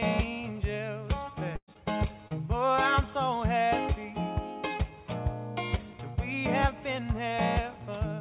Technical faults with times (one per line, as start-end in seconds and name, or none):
1.56-1.78 burst of packet loss
1.73-1.77 short concealed packet loss
2.28-2.32 short concealed packet loss